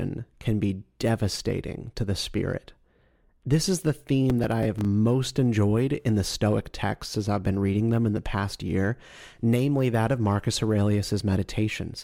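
From 4.30 to 4.85 s, between "is the" and "enjoyed in the", processor overload crackle tears through the speech. Around ten short buffers, each about 5 ms, miss their deadlines and repeat stale audio with hard edges. Unlike a single dropout, this is a dense, gritty burst that ends once the load passes.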